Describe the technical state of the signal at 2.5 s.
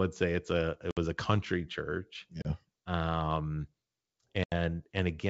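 At 2.5 s the signal is recovering from packet loss on an ADPCM call. Right after "a country church", a hard-edged hole of about 30 ms runs from 2.42 to 2.47 s, likely about three lost packets. When the speech returns, the decoder's predictor and step size are out of step with the sender's. It comes back with brief distortion, then settles over the next few tens of milliseconds. The wideband G.722 path is clear around it.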